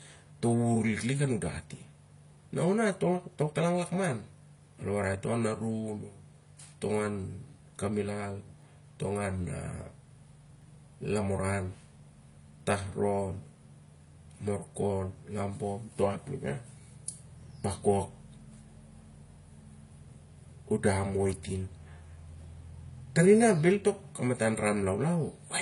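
A speech recording carrying two faults. Throughout, the audio has a hard ceiling at 11.1 kHz and a mix of smeared, swirly high-frequency artefacts with a metallic, synthetic top end. That combination points to transcoding between lossy codecs, likely an MP3 stage near 49 kbit/s followed by low-rate HE-AAC, with each encoder adding its own damage to the last. On a spectrogram this shows as a flat cut-off at 11.1 kHz, blotchy quantisation holes below it, and a patchy, repeated-looking band where the highest content has been rebuilt. Separately, from 8.62 s to 16.64 s there are periodic USB or driver dropouts, heard as regular ticks every 2.0 s, about five in all. Each is a tiny gap filled with silence, far shorter than a millisecond, and it clicks only where speech is present. On the waveform they appear as hairline notches at exact 2-second spacing, and on a spectrogram as thin vertical broadband lines.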